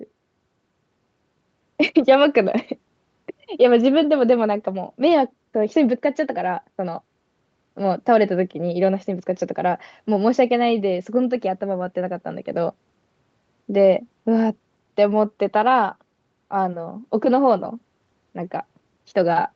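Speech passed through ordinary call microphone processing and a WebRTC call path with no technical faults, and its content stops at about 8 kHz, which fits a wideband call codec.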